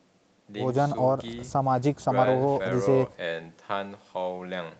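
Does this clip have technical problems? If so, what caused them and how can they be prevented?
No, this speech clip has no technical problems, so there is nothing to prevent. Nothing is heard above 8 kHz, which fits a call path using the Opus codec in wideband mode at around 40 kbps, and that band limit is normal for such a call.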